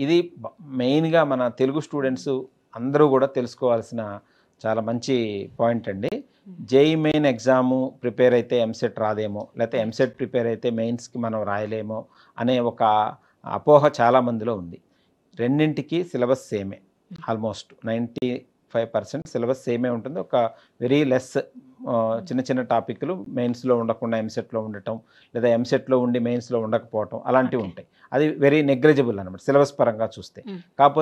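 Gaps between stream segments cut hard-edged silences of about 7 to 39 ms into the sound at 6.09, 7.12, 10.13, 12.14, 17.16, 18.18, 19.22 and 23.25 s. They fall on 1-second segment boundaries whose timestamps fail to meet, so silence is inserted without losing audio.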